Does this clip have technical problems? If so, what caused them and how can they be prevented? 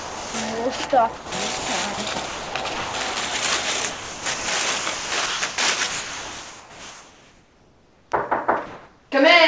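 Yes. There is sound chopped by the voice detector from 0.00 to 3.16 s and again from 3.92 to 8.12 s. Quiet portions drop out and are filled with synthetic hiss, about 1.2 s of fill in the first stretch and 3.2 s in the second. The sound is choppy. The likely cause is the sender's voice activity detector repeatedly toggling transmission off and on. Disabling discontinuous transmission, or lowering the detector's threshold and adding hangover time, would prevent it.

From 8.66 to 9.12 s there is comfort noise in place of the background. The real background, sitting about 30 dB below the loud parts, gives way to a flat, featureless noise about 2 dB different in level. This likely comes from the sender pausing transmission while the receiver synthesises filler. Turning off discontinuous transmission keeps the genuine background. Separately, the call path's codec passes nothing above 8 kHz, which fits a wideband call codec.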